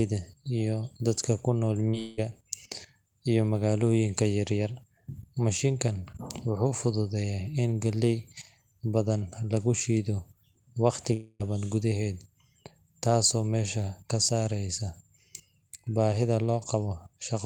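At 1.89 s the speech smears for about 40 ms. This is short concealed packet loss: a few packets arrived too late to decode, so the receiver stretched the preceding sound across the hole and crossfaded back into the real signal. It is too short to fade or fall silent, so it comes across as a wobble rather than a gap, and the continuation was pitched or noise-shaped depending on what came just before.

Barely 40 ms later, from 1.99 to 2.19 s, a longer stretch of about 180 ms is replaced by a synthetic continuation that decays without reaching silence. At 11.13 to 11.42 s about 260 ms is lost, the concealment fades out, and roughly 10 ms of silence follows before the speech resumes further on. Both are likely long network dropouts. The artificial tail lasting tenths of a second, and the piece of speech skipped over, set these apart from the brief smear at 1.89 s.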